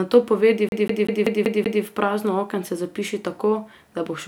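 CD stuck on one turn from 0.69 to 1.83 s: a scratch keeps throwing the laser back, so a 191 ms slice of speech repeats six times in a fast, even stutter with brief mutes at each jump.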